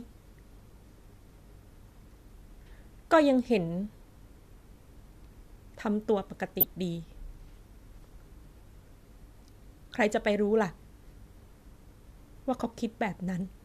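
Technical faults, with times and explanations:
6.60 to 6.63 s, corrupt frame decoded: a short, harsh blip of noise cuts across the speech for about 30 ms, peaking loudly at roughly -10 dBFS. Flipped bits in the compressed data led the decoder to misread gains and spectral codes, so it rebuilt energy at the wrong frequencies rather than the real signal. The length suggests a handful of consecutive damaged frames, each adding its own burst of misplaced energy.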